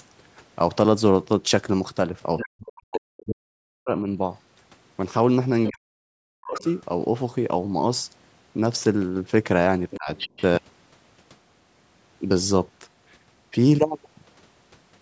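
From 2.37 to 3.21 s, a second, quieter voice sits under the speech, about 15 dB down. This is the other side's voice leaking through. The far end's audio likely played on a loudspeaker, and the echo canceller left some of it in the microphone.

From 2.44 to 4.07 s the main speech drops sharply, by around 40 dB at its deepest. This is speech suppressed in double talk. Both sides were likely talking at once, so the echo canceller turned everything down.

The same pair returns. Speech is suppressed from 5.68 to 6.65 s. The faint second voice leaks through from 6.54 to 6.8 s.

From 9.9 to 10.43 s the other side leaks in again. A brief, shallower dip cuts the speech from 9.96 to 10.09 s.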